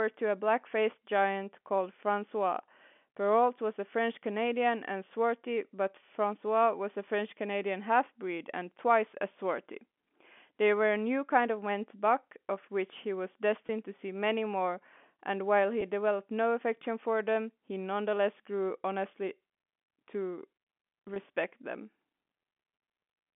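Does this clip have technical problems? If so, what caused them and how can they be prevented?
Yes. Packet loss with pitch repetition: the network dropped audio packets, and the receiver filled each gap by repeating the last pitch period. Gaps fall at 13.67 to 13.69 s (20 ms), at 15.81 s (10 ms), and from 21.08 to 21.16 s, where about 30 ms went missing in runs of up to 20 ms. Each sounds like a brief held, buzzy catch over the G.711 telephone-band audio. A larger jitter buffer, forward error correction, or a less congested network path would prevent these losses.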